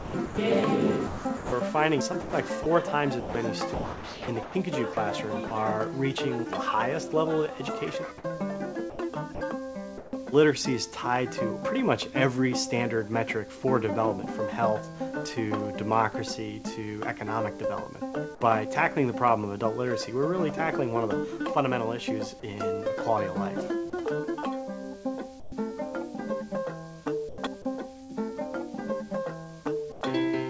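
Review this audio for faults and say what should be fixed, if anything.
From 0.00 to 5.51 s, 8.90 to 10.13 s and 27.29 to 28.12 s, the sound turns choppy. This is sound chopped by the voice detector, likely from the sender's detector toggling and filling about 1.6 s, 0.3 s and 0.14 s with comfort noise.

At 18.35 to 18.41 s, 23.90 to 23.93 s, 25.40 to 25.52 s and 29.92 to 30.01 s, brief bits of quiet sound give way to steady noise. This is sound dropped by the voice detector, likely its gate closing early and losing 20 to 70 ms each time.

To prevent both, lower the voice detector's threshold and lengthen its hangover at the sender, or disable discontinuous transmission. The G.722 path's cutoff above 8 kHz is expected.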